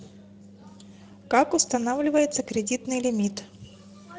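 From start to end the speech carries Speex codec damage, plainly audible: a hoarse, noisy roughness, since the CELP coder lacks bits to rebuild the excitation, which fits a setting near 16.8 kbps. Unlike MP3-style swirling or steady background hiss, the grit rides within the voice itself.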